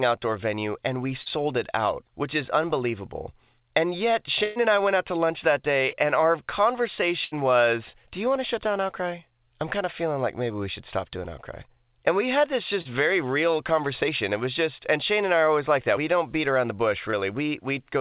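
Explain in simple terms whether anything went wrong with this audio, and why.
Short concealed packet loss hit four times, at 1.22, 5.90, 12.81 s (between "we had this" and "very real conversation") and 17.11 s (after "don't beat around the"). A few hundredths of a second never arrived, so the receiver stretched the previous sound to cover them, leaving a quick smear or wobble.

A burst of packet loss happened twice, at 4.44 to 4.58 s, just before "and I went out", and at 7.24 to 7.33 s. About a tenth of a second was lost in a row, so the sound briefly hangs as a buzz or hiss, then jumps ahead with that piece gone. All of this comes through the narrow, phone-like call sound, with nothing above 4 kHz.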